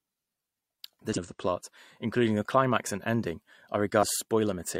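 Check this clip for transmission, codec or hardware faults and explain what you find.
The speech carries two short bursts of damaged data in the compressed stream, at 1.13 to 1.19 s, just before "of the plot including", and at 3.99 to 4.03 s. Corrupted bytes made the decoder misread frames, lose sync and hunt for the next valid frame header. Each event lasts roughly 45 to 55 ms and is heard as a brief chirp, squawk, click or short hole.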